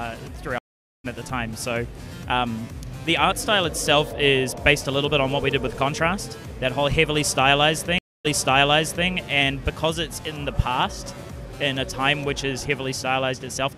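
Two stream reconnects occur, where the connection drops and the player restarts its decoder partway through the stream. At 0.58 s the audio cuts to about 0.46 s of silence, then resumes at a point roughly 0.4 s further on, so material is skipped. At 7.98 s a 0.26 s gap is followed by playback picking up 0.84 s earlier, repeating a stretch already heard, with each restart fading back in as the new decoder begins.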